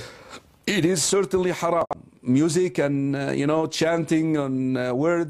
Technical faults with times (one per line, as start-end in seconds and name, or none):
1.81-1.96 corrupt frame concealed